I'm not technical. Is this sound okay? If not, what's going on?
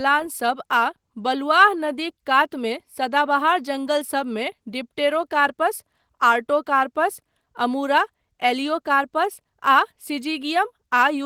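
Yes, it sounds fine, with nothing wrong to point out.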